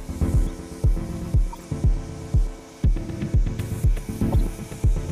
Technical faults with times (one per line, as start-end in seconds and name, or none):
1.52-1.64 corrupt frame decoded
4.32-4.34 corrupt frame decoded